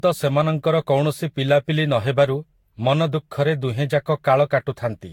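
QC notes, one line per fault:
throughout: generation loss. The speech sounds swirly and hollow, with blurred consonant onsets and nothing above 18.5 kHz. The damage is heavier than one encode at what sounds like around 70 kbit/s would leave, likely from about five rounds of Vorbis encoding. Each pass requantises on a shifted frame grid, so spectral holes and noise accumulate and wander, unlike the steady, fixed artefacts of a single low-bitrate encode.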